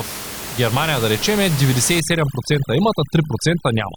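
At 2.0 s, just after "да речем е", overdone noise removal sets in and lasts to the end of the speech. The noise reduction is pushed too hard. Room noise sits only about 10 dB below the speech, so the processor's noise estimate overlaps quiet parts of the voice. It cuts those frequency bands nearly to nothing. The background drops and breaks up into twinkling specks.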